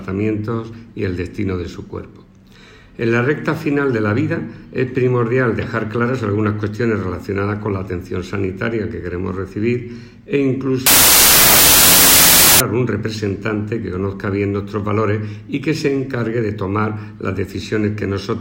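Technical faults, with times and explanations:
10.86–12.60 s, wrong sample width: loud harsh noise buries the sound, slowed to two-thirds speed and pitch, as packed 24-bit samples are read as 16-bit.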